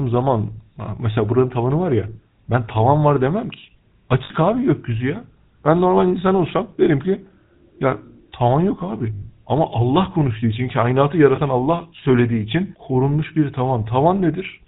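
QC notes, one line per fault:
Throughout: GSM full-rate codec. The audio is band-limited, with nothing above 4 kHz, and carries a buzzy, gravelly roughness from the regular-pulse excitation, which fits 13 kbps full-rate coding. The coarse pulse excitation cannot follow fine spectral detail, so the damage is plainly audible.
4.24–4.31 s, 9.14–9.26 s and 11.36–11.39 s: lost GSM frames. About 60 ms, 80 ms and 20 ms of sound are missing. Concealment repeats the last good frame's settings, so each gap is held as a short rough, metallic ring rather than a clean dropout.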